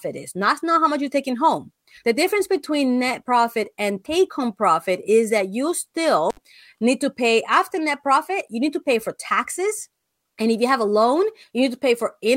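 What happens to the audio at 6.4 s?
An intermittent contact cuts the speech from 6.30 to 6.37 s, after "profit is that you". A loose connection opens for about 64 ms, leaving crackle at each edge.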